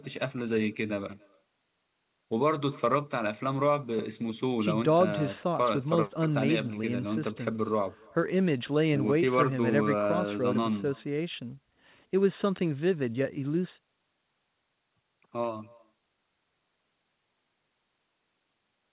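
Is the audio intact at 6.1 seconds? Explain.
No. At 6.1 seconds, as throughout the clip, there is echo with no canceller: the far end's loudspeaker feeds its microphone and nothing removes it, so the speech returns around 300 ms later as a faint, thin shadow about 28 dB down.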